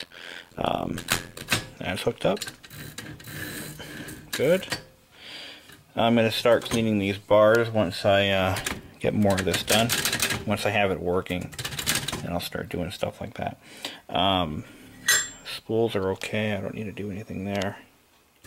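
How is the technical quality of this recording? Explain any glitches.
The recording has one clear glitch, confined to its opening.

Overlap-add ripple runs from 0.00 to 1.44 s. The sound was split into short windowed frames and rebuilt, but the overlapping windows don't add back to a steady gain, so the level dips once per frame, around a hundred times a second. The dips are extremely deep, about 60 dB, so the level nearly drops to silence each cycle, producing a harsh, buzzy, robotic flutter rather than a gentle tremolo.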